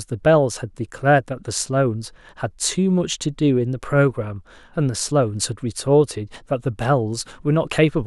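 No technical faults can be heard anywhere in this speech recording. Nothing in the audio calls for a timestamp or a note.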